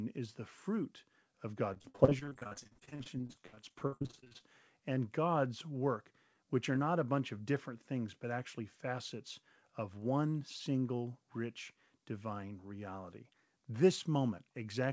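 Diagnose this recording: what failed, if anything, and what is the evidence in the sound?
From 1.74 to 4.44 s the speech turns choppy and robotic, with dozens of short holes, the longest about 62 ms, and close to half the stretch patched over. This is repeated packet loss on the network: each missing packet is concealed by extending the previous sound, and the band-limited call path stops at 8 kHz.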